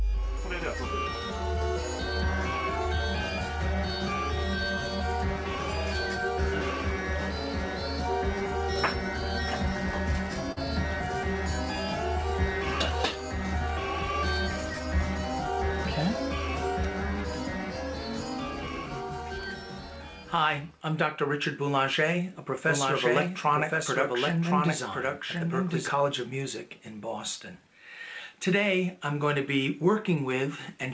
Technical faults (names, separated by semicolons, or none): short concealed packet loss; doubled audio track